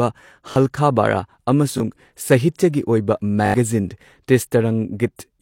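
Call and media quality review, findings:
Repeated buffer at 0.52–0.56 s, 1.78–1.80 s and 3.46–3.54 s: brief stutters in the speech with hard joins. Output device underran and replayed its last 20 ms block, twice, once and four times respectively, losing roughly 40, 20 and 70 ms of audio.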